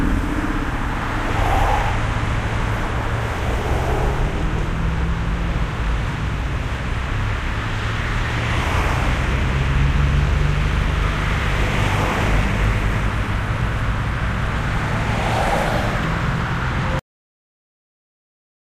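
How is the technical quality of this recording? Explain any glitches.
The recording has one clear glitch: a cut-off end. At 16.99 s the audio stops abruptly in the middle of a sound and drops straight to digital silence with no natural decay, and that dead silence runs for the final 1.7 s or so. The mechanism is that the last buffers of audio were never written or played out, so the sound is truncated mid-event rather than fading or finishing on its own.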